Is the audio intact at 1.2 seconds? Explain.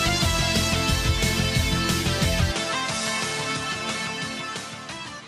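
Yes, the audio is intact at 1.2 seconds, with no dropout, click, distortion or other fault at that moment.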